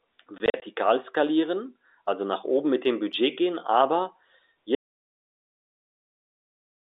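From 0.38 to 0.62 s, just before "skalieren also nach oben", packet loss filled with silence chops the speech. About 100 ms vanishes in hard-edged holes, the longest 40 ms, which fits 20 ms packets.

At 4.75 s, right after "gehen aber", an audio dropout to silence begins. The signal falls to silence with no room tone, likely from a lost input, and never returns.

The narrow 300 to 3700 Hz band of the G.711 telephone coding is audible throughout.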